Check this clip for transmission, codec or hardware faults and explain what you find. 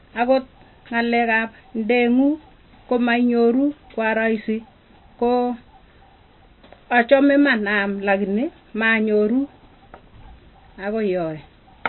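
One codec fault runs through the whole recording.

MP3 compression, likely the cause, is audible from start to finish. The encoder appears starved of bits, which fits a low bitrate around 24 kbps, so it discards the treble outright and leaves nothing above 4.1 kHz. Weaker frequency lines drop in and out between frames. The speech sounds dull and muffled, with a watery, swirling texture, s sounds turned metallic and chirpy, and consonant onsets smeared.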